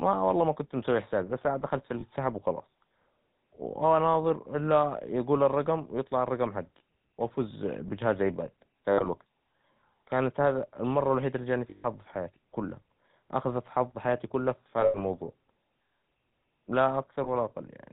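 The whole clip of speech passes through the GSM full-rate codec. That codec models the vocal tract and drives it with a sparse, regularly spaced pulse excitation. The rate is consistent with 13 kbps. Nothing above 4 kHz survives. The damage is plainly audible: a buzzy, gravelly roughness over the voice, with the top end missing.

Lost GSM frames then occur five times. The decoder fills each gap by repeating the last good frame. At 2.00 to 2.03 s, 20 ms goes missing, which fits a single lost frame. It leaves a brief metallic blip. From 8.90 to 9.07 s, 100 ms is lost in pieces across 160 ms, the longest run about 70 ms. The sound rings roughly, then recovers. From 11.70 to 11.85 s, 140 ms is lost in one stretch. It gives a sustained metallic ring. From 14.80 to 15.03 s, 140 ms is scattered over 200 ms, the longest run about 100 ms. From 17.24 to 17.29 s, another 20 ms drops with a short rasp.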